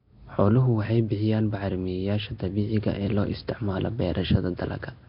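Nellymoser compression runs through the whole speech recording, giving a rough, hissy, underwater smear with nothing above 5.3 kHz, likely from heavy Nellymoser Asao coding consistent with about 22 kbps.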